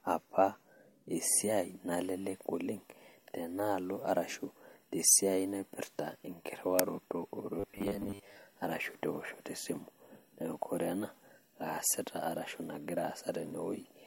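A speech recording with robotic sound from repeated short buffers between 7.60 and 8.37 s, just before "arashu tewoshoto". The voice collapses into a rigid metallic buzz pitched at 100 Hz, which fits a 10 ms chunk looping while most of the real audio in that stretch is skipped, likely because new data arrived too seldom. Unlike comb filtering, the buzz holds one fixed pitch instead of coloring the voice, and unlike a stutter the loops are too short to hear as separate repeats.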